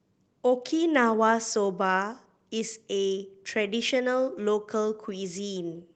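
Speech, with no audible faults anywhere in the clip.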